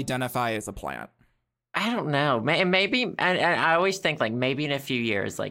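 Channel delay (comb filtering) runs from 0.57 s to 1.57 s, ending just before "I don't know". One channel lags the other by roughly a tenth of a millisecond, only a few samples, and when the two are folded to mono the shared signal cancels at regularly spaced frequencies. With the first notch around 5 kHz, the speech loses its upper presence and takes on a hollow, slightly dull, phasey quality for that second.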